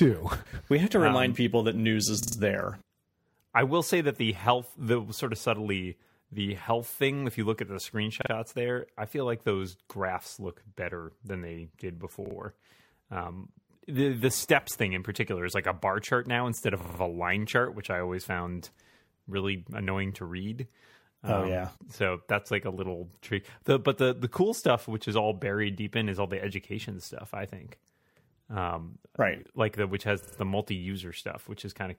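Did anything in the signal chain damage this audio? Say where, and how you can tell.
Yes: a repeated buffer at the driver or buffer stage, where late audio made the device replay its last block. The speech stutters at 2.23, 8.22, 12.26, 16.81 and 30.23 s, a 46 ms slice repeating two to four extra times with hard joins, which fits a 2048-sample buffer.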